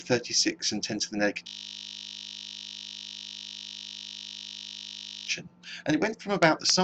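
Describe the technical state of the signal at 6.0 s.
At 6.0 s the signal is intact, with no audible technical fault at that point.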